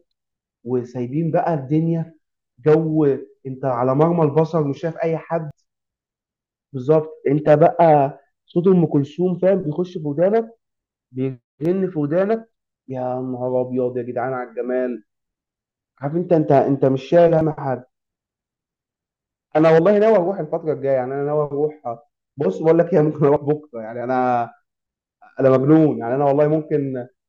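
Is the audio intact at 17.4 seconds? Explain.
No. At 17.41 s the speech skips: a brief sliver of audio, roughly a twentieth of a second, is missing, and the sound on either side is butted together with no gap, so the flow jumps forward abruptly. This is audio missing between chunks. The likely cause is a recorder or processor working in 6.0-second blocks that drops a short piece while closing one block and starting the next.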